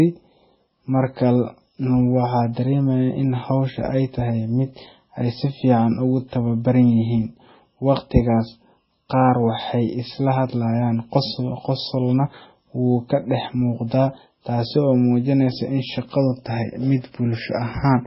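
MP3 compression damage runs throughout the speech, likely from a very low-bitrate encode, which fits about 16 kbps. Starved of bits, the encoder cuts everything above 5.6 kHz and drops weak frequency lines frame to frame, leaving a heavy watery swirl, chirpy s sounds and smeared attacks.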